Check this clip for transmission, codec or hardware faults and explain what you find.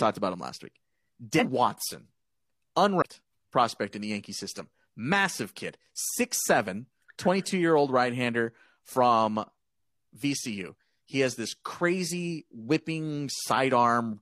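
Two codec faults are present, both compressed frames skipped. At 1.35 to 1.45 s, and at 2.98 to 3.02 s just before "prospect in the", whole frames never reach playback. The speech jumps ahead by roughly a fifth of a second each time.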